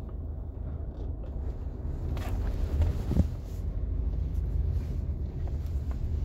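Nothing goes wrong anywhere in these everyday sounds; there's no fault to point to at any moment.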